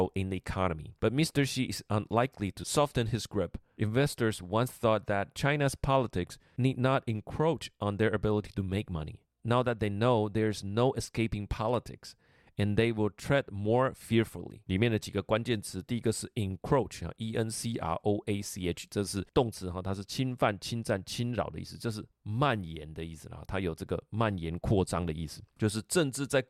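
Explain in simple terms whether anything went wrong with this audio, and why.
Nothing went wrong here.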